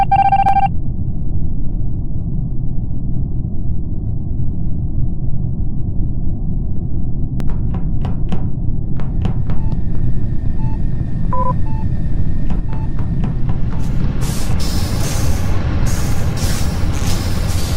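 At 7.40 s the sound jumps forward. No gap or silence comes between the two sides. The audio on either side of the jump is simply joined. This is likely a dropped buffer (overrun). The program did not read its samples in time, and the hardware wrote over them. Only a few milliseconds are lost, about 3 ms. That fits a small buffer. The skip is heard as a brief jump rather than a missing chunk.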